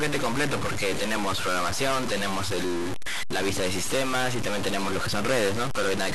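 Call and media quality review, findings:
Harsh, buzzy distortion throughout the speech clip, with noise filling the pauses. Likely a stuck bit in the converter or data line, with an error step of around -25 dBFS. Unlike clipping, it persists at low levels and in silence, not just on peaks.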